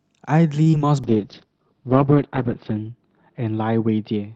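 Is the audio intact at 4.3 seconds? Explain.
No. At 4.3 s the audio is still inside a call bitrate drop that began at 1.04 s and runs to the end. The sound fits an Opus encoder squeezed from about 64 kbps to around 11 kbps, coding coarsely: speech turns rough and watery. On a spectrogram the top edge falls from 8 kHz to 6 kHz, and the harmonics look blotchy and smeared.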